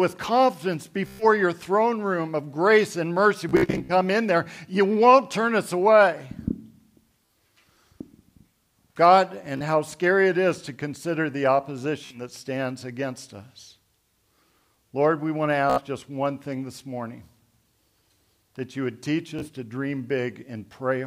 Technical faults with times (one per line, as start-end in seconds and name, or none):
1.07-1.24 Bluetooth stutter
3.49-3.93 Bluetooth stutter
7.26-7.30 Bluetooth stutter
9.57-9.63 Bluetooth stutter
12.06-12.21 Bluetooth stutter
15.70-15.81 Bluetooth stutter
19.39-19.49 Bluetooth stutter